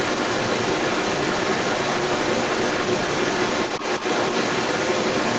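From 0 s to the end of the clip, a second voice runs along with the speech, sitting roughly 10 dB above it, so it dominates rather than trailing in the background. This is the other side's voice leaking through: it was likely played on the talker's loudspeaker and picked up by the microphone, with the echo canceller failing to suppress it. Both voices share the call path's band limit, with nothing above 8 kHz.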